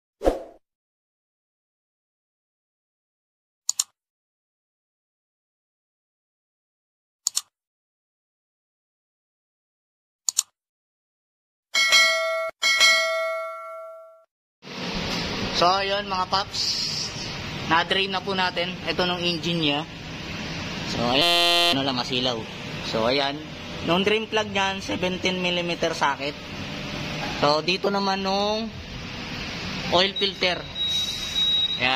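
From 21.22 to 21.73 s, a system hang loop replays one 5.8 ms slice, a 256-sample buffer, as a steady 172 Hz buzz. Its exact repetition distinguishes it from dropout.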